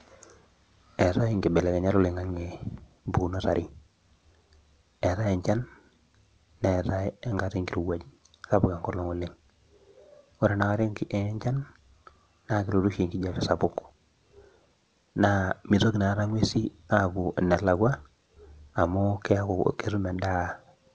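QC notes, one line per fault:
Nothing stood out on listening to this speech, which comes through a G.722 call path with nothing above 8 kHz.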